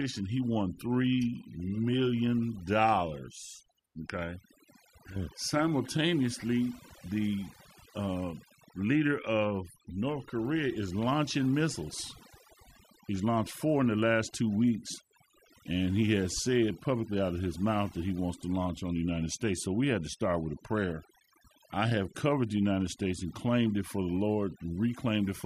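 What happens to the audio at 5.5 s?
At 5.5 s the speech carries overdone noise removal, which runs through the whole clip. The noise reduction is set too strong. Bands near its noise estimate are pulled far down or cut, taking quiet speech detail too. The background drops and breaks up into twinkling specks.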